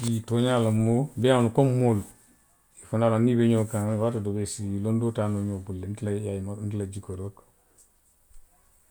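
Speech recording with no technical faults to report.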